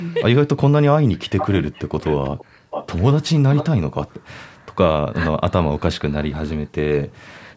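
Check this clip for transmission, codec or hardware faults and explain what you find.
Two things stand out in the speech: an echo leak in four short stretches and some background gating by the echo canceller in three spots.

The echo leak shows up at 1.38 to 1.83 s, 2.01 to 2.45 s, 2.70 to 3.04 s and briefly at 3.56 to 3.65 s. You hear a ghost copy of the speech trailing about 446 ms behind, sitting roughly 10 to 15 dB under the main signal. That's likely a far end on speakerphone whose canceller didn't scrub everything its mic picked up, so the leftovers got sent back.

The background gated by the echo canceller happens at 2.45 to 2.70 s, 4.12 to 4.22 s and 4.55 to 4.66 s. The room tone suddenly sinks, by about 40 dB in the first two and about 26 dB in the last, then comes back. The canceller clamped the mic down hard while it thought the loudspeaker was playing, and released it a moment later, which leaves those brief holes in the ambience.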